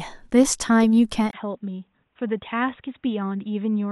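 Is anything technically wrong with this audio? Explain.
Yes. At 1.31 s, after a 20 ms silence, the speech turns dull and boxy, loses everything above 3.8 kHz, drops a few dB, and gains faint background noise, likely from an input switched to a poorer device.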